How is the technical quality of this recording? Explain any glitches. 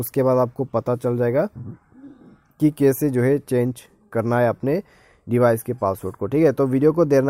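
The technical quality of this recording is sound, with no glitches to explain.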